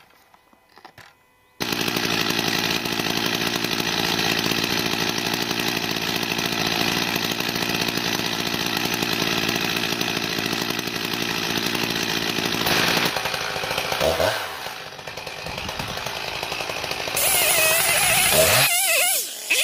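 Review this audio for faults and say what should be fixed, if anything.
The audio jumps forward at 2.80 s, 4.69 s and 8.19 s, losing around 70 ms, 20 ms and 40 ms of sound with no gap. These are likely dropped buffers (overrun), where capture wasn't read before the hardware overwrote it. Enlarging the input buffer and raising the capture thread's priority should prevent them.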